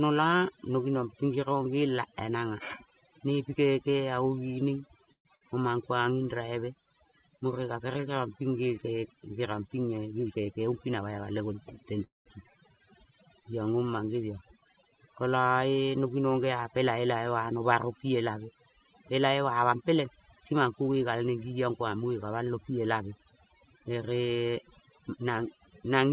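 Overdone noise removal runs through the whole clip. The reducer is set so hard that it's knocking out individual frequency bands wherever they sit near its noise estimate, so the background drops and breaks up into little twinkly specks. It's all band-limited, with nothing above 4 kHz, which fits a G.711 mu-law call path at 64 kbps.

At 5.12 s the sound smears into a short held buzz or hiss that fades, leaving about 100 ms of silence inside a roughly 129 ms stall. Then it carries on exactly where it stopped, with nothing lost, just pushed later. That's a call audio freeze, likely from packets stuck in transit and the jitter buffer running dry.

Right after, from 5.35 to 5.50 s, comes a burst of packet loss. About 60 ms of audio is gone for good. The receiver papers over it with a fading continuation of the last sound, and when things resume you've jumped past the missing bit.

From 9.97 to 11.14 s there's a jitter buffer speed-up at about 111%. 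The receiver is trimming tiny pitch-period slices over and over to drain excess delay, around 150 ms in total. Pitch stays put but it sounds noticeably hurried.

At 12.04 s the same freeze behaviour comes back, bigger this time. The held sound tails off into about 160 ms of silence within a roughly 214 ms hold, then resumes intact and later.

Two more speed-ups follow. From 14.62 to 15.00 s it runs at about 113% and sheds around 50 ms. From 19.28 to 21.13 s, running up to "neng ngi ong", it's about 109%, with roughly 150 ms cut. Both have the same rushed feel at normal pitch.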